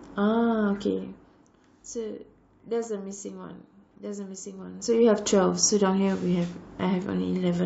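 This speech clip has nothing technically wrong with it.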